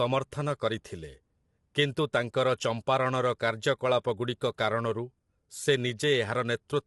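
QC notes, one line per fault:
Throughout: low-delay AAC compression. The speech sounds rough and grainy with a cut top band, likely from AAC-ELD, whose short frames blur pitch harmonics; the damage fits roughly 32 kbps. A spectrogram shows smeared harmonics, noise between them, and nothing above 11.6 kHz.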